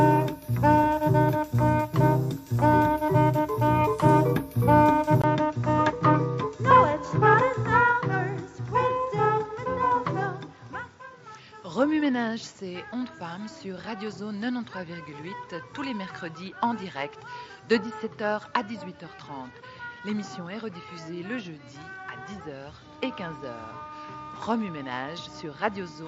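At 5.22 s there's a brief dropout, about 20 ms, and from there to the end the sound comes back duller and a bit boxy, with nothing above 7.6 kHz and fresh background noise sitting roughly 30 dB under the signal. Loudness barely moves. That combination is the classic mark of an input switched to a poorer device, most likely the system jumping to another mic or a headset's call profile mid-recording.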